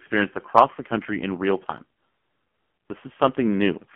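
A speech recording carried over an AMR narrowband mobile codec for its whole length. Sound is confined to about 200 Hz to 3.4 kHz. Heavy coding damage makes the voice buzzy and synthetic, which fits a low AMR-NB rate near 5.9 kbps.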